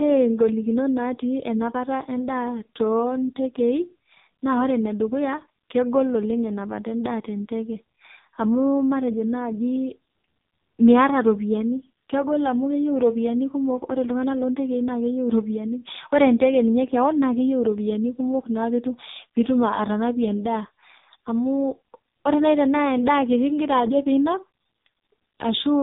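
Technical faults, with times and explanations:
Throughout, AMR narrowband mobile codec: the speech is hard band-limited, with nothing above 3.8 kHz, so sibilants and consonant detail are gone and the voice sounds boxed-in and telephone-like. The damage is heavy: the voice has a buzzy, synthetic edge because the codec rebuilds it from a vocal-tract model excited by only a few pulses per 5 ms subframe. That degree of coarseness points to the codec's lowest modes, around 5 kbps.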